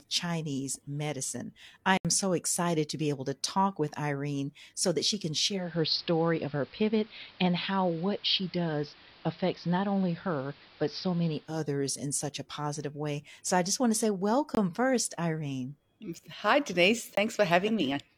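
Speech, with two kinds of trouble. There are blocks of digital silence at 1.97 s (75 ms, between "medicine I" and "so excited to be"), 14.55 s (21 ms, after "just want to say") and 17.15 s (21 ms). In each, the audio drops hard to silence and back. The two short ones fit a 1024-sample buffer not being filled in time. From 5.44 s, after "so that she can", to 11.62 s, before "in such a positive", the digital radio blends to the analogue AM signal over 320 ms. The level shifts by about 2 dB, and hiss comes up roughly 30 dB below the speech.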